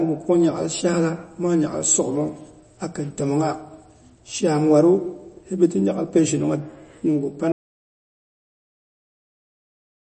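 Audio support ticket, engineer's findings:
MP3 compression throughout. Nothing above about 8.3 kHz. Watery, swirly texture on sibilants, smeared onsets. Likely a low-bitrate MP3 encode, consistent with about 32 kbps. Starved encoder drops treble at fixed cutoff, zeroes weak spectral lines frame to frame.

Audio dropout to silence from 7.52 s to end. Speech cuts off mid-flow into silence. No room tone in the gap. Likely input loss upstream, such as a disconnected device, failed link or mute, while the recorder kept writing silence. Content after 7.52 s lost.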